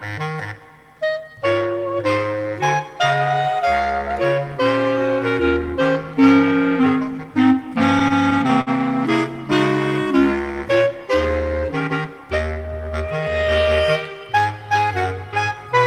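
Between 7.99 and 8.70 s you get repeated stalls, a stutter: six short hiccups, the longest about 54 ms, where packets ran late, the jitter buffer drained, and the receiver stretched the last sound to cover about 113 ms. Nothing's lost, it just drags.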